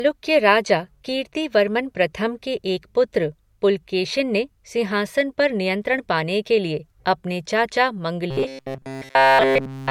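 Throughout, the speech has smeared, swirly MP3 artefacts, likely low-bitrate audio saved at a high bitrate. The spectrogram shows a hard ceiling and patchy high bands that fit a 64 kbit/s source.

From 8.31 s to the end, robotic sound from repeated short buffers sets in, likely from repeating roughly 7.5 ms chunks. This produces a fixed 134 Hz metallic buzz, visible as rigid evenly spaced harmonics and a periodic waveform.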